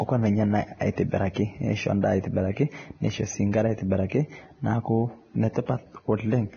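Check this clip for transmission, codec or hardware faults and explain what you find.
One codec fault runs through the whole speech clip.

Vorbis compression, throughout: nothing is heard above 6.6 kHz, and the remaining treble is grainy and hissy, with consonant onsets smeared. This is likely a heavily compressed Vorbis encode at around 18 kbps, where coarse treble quantisation replaces fine detail with noise of similar energy.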